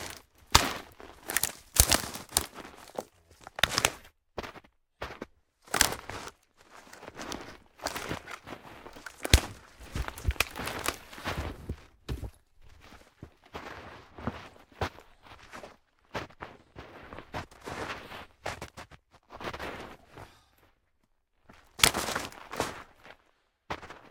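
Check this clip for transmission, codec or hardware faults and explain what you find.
Nothing in the audio points to a transmission, codec or hardware fault.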